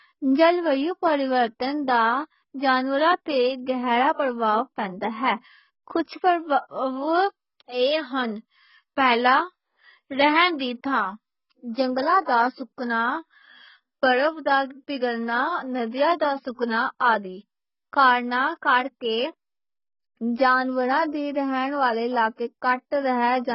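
A speech recording with heavy lossy-codec damage throughout. Nothing is present above about 5.6 kHz, so the voice sounds dull and boxed in. Sibilants lose their edge and turn fizzy. Sustained sounds warble and smear. The likely cause is AAC compression at a very low rate, consistent with roughly 12 kbps AAC-LC. At that rate the encoder lowers its cut-off, drops or fakes whole bands, and leaves audible holes in the spectrum. There is also a pre-echo from 10.58 to 10.60 s. A hiss runs for about 20 ms just ahead of a sharp onset, and the attack itself sounds softened. The codec spreads its quantisation noise across the whole transform block. Noise meant for the loud attack therefore leaks into the quiet moment before it.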